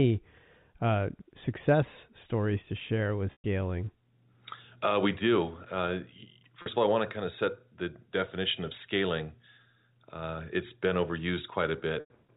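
Speech over a G.711 telephone path, and the trouble is packet loss with pitch repetition in three spots. At 6.62 to 6.66 s, a 40 ms gap gets bridged by looping the last pitch period, so you hear a brief buzzy hold. The longer losses at 3.32 to 3.44 s (120 ms) and 12.00 to 12.10 s (100 ms) outlast the repeat. It fades out over roughly 50 ms into silence, then the speech cross-fades back in. Gap lengths fit runs of 20 ms packets.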